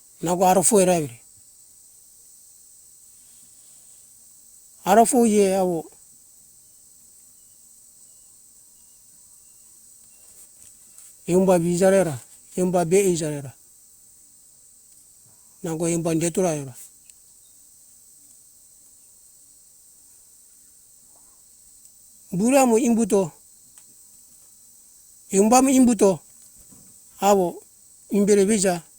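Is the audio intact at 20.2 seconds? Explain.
Yes, the audio is intact at 20.2 seconds, with no audible fault at that moment.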